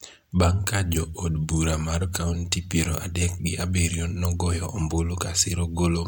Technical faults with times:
0.61-6.08 pre-emphasis left on

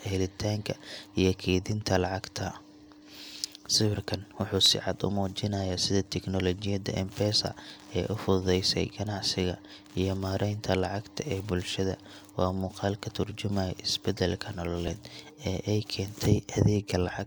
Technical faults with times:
4.66 repeated buffer
14.88 repeated buffer

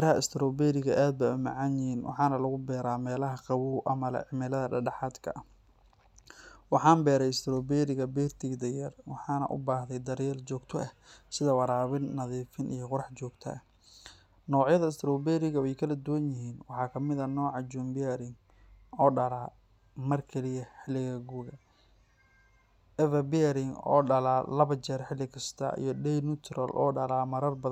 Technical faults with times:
none

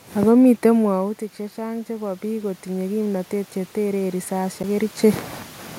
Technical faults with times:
0.75-5.30 automatic gain rising
4.63 CD skip

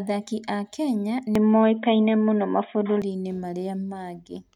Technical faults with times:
1.35-3.02 input switched to a poorer device

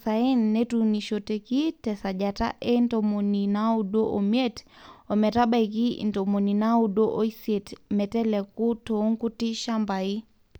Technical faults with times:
0.98 dropped samples

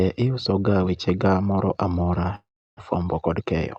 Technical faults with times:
2.35-2.81 long network dropout

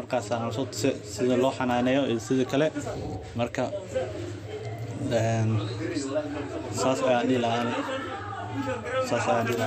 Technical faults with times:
7.62 electrical switching spike

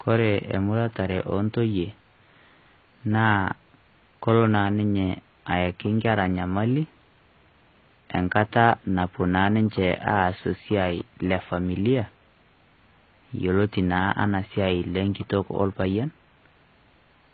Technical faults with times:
0.00-17.34 AAC compression

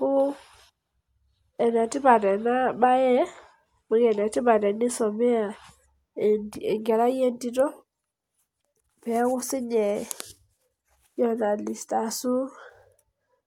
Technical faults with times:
none

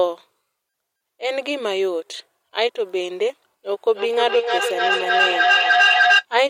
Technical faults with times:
3.70-6.27 feedback echo between two devices

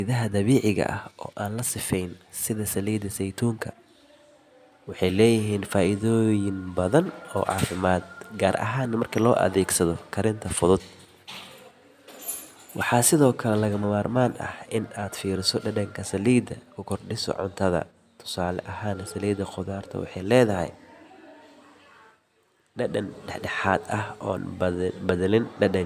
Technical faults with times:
none

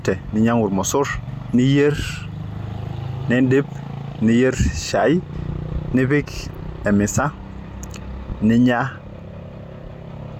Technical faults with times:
1.27 compressed frames skipped
5.33 compressed frames skipped
6.85 compressed frames skipped
8.30-8.33 loud pop

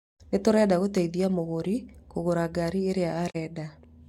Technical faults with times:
3.29-3.36 digital broadcast dropout

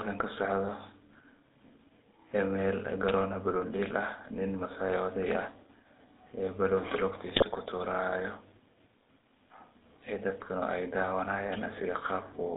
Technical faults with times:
0.00-12.57 GSM full-rate codec
7.36-7.44 GSM bit errors

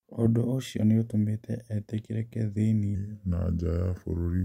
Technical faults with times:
2.95-4.44 section at the wrong speed

